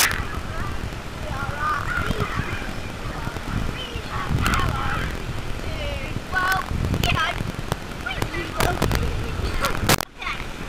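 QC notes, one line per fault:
throughout, buffer tearing: the writer and the hardware read pointer of the output ring buffer have drifted out of step, so they cross inside every period. A small slice of each buffer, under a tenth of it, replays audio from roughly a tenth of a second earlier, with hard joins on both sides. The repeating seams make a robotic buzz at 43.1 Hz, which fits a 1024-sample buffer, and the buzz appears only while sound is present.
0.00–0.05, 4.47–4.54, 6.52, 7.04–7.06, 7.72, 8.22, 8.60–8.95 and 9.65–9.94 s, integer overflow: at each of these points a sum or gain exceeds the largest integer value and wraps to the opposite sign instead of being limited. The peaks flip across the full range, producing sharp cracks far harsher than clipping. Overdrive is about 1 to 5 dB at most of these points. It is about 7 dB at the opening, about 12 dB in the long burst from 8.60 s and about 9 dB from 9.65 s, so those three are the most violent.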